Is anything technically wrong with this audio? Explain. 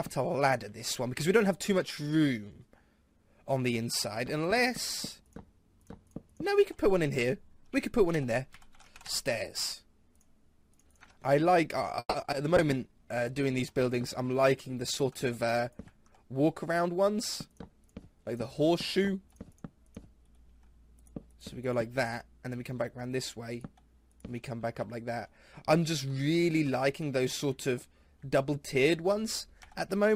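Yes, there is a burst of network trouble just after 12 seconds, followed by degraded quality and timing changes.

Long network dropout, 11.99 to 12.23 s: audio likely stopped arriving, so about 220 ms is a fading continuation of the last sound, with brief silence before it resumes minus the lost part.

Short concealed packet loss at 12.23, 12.26 and 12.31 s: each time about 20 ms went missing and was patched by extending the preceding sound, heard as quick smears or wobbles.

Call bitrate drop, 12.57 to 16.70 s: the encoder fell from 64 to 26 kbps, holding the lowest rate for about 3.4 s, so the sound turns coarse and duller.

Jitter buffer slow-down, 12.67 to 13.25 s: the receiver repeated tiny pitch-period pieces, adding 78 ms, so the audio drags at 88% speed while keeping its pitch.

Jitter buffer speed-up, 14.76 to 16.89 s: small pieces were trimmed to shed excess delay, about 150 ms in all, making the audio run hurried at 107% speed.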